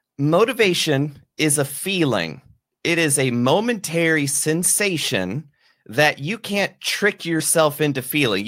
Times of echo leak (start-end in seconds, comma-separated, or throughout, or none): none